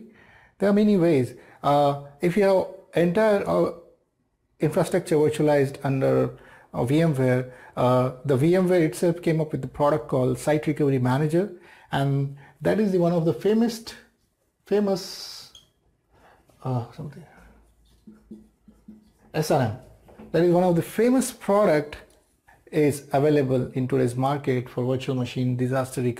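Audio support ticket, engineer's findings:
Nothing to flag on this one: no glitches, dropouts or artefacts turned up anywhere in the recording, so there's no fault to chase here.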